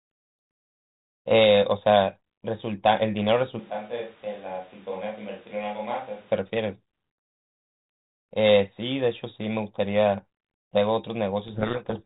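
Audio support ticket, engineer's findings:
Switch to a distant microphone, 3.6 to 6.3 s: abrupt hollow, roomy sound, thinner low end, level down about 10 dB, background noise only about 20 dB under the speech. Likely the close mic dropped and a far mic covered. Waveform: sudden step down. Spectrogram: weaker lows, reverb smear, raised noise floor.

Codec payload misread, 11.48 to 12.03 s: speech buried in harsh distortion to the end. G.726 code words decoded in reversed bit order, so wrong difference values feed the predictor. 32 kbit/s G.726 path otherwise lightly coloured. Spectrogram: broadband hash to 4 kHz.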